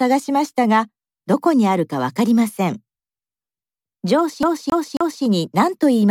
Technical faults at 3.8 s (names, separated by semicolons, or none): none